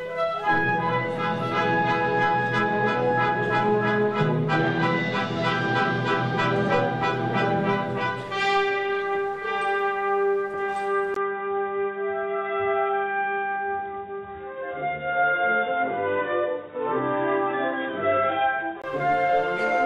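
At 11.14 s the sound turns dull and boxy. A brief gap of about 20 ms marks the change. From there the top end is gone, with nothing above 3.8 kHz. The level stays about the same. A faint new background noise appears, around 50 dB under the signal. At 18.84 s the full bandwidth returns. The likely cause is an input switched to a poorer device, such as a narrower-band microphone or headset call profile.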